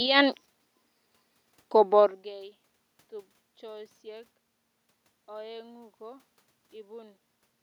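Nothing in the system goes wrong here; the room noise belongs to the recording, and the change in level around two seconds in is just the talker shifting position relative to the microphone.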